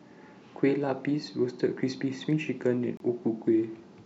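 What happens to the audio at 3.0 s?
From 2.97 to 3.00 s the speech cuts to about 29 ms of silence, likely a Bluetooth dropout, showing as a blank gap in the waveform and spectrogram.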